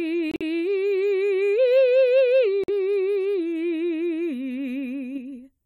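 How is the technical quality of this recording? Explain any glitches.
The music recording has three transmission glitches: two short dropouts and one brief burst of spurious sound near the end.

Corrupt frame muted, at 0.31 to 0.42 s and at 2.64 to 2.70 s. The music stops abruptly for about 110 ms and then about 60 ms. The decoder rejected damaged compressed frames and the player substituted silence. The gap lengths point to roughly four frames and two frames lost. Because the playback timing is preserved, the music resumes in place, with no skip or shift.

Corrupt frame decoded, at 5.15 to 5.18 s. A short chirp-like burst, about 34 ms long and peaking near -30 dBFS, sits over the music. Here the damaged data passed the decoder and was played. The corrupted gain values and spectral codes placed energy at the wrong frequencies for about the span of a couple of frames, which produces a brief artificial noise unrelated to the music.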